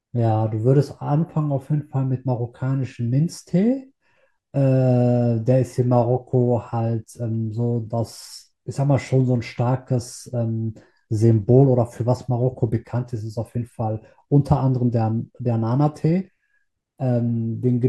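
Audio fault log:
The speech signal holds steady and continuous from its opening to its close, with no audible disturbance anywhere in its level, timing or frequency content.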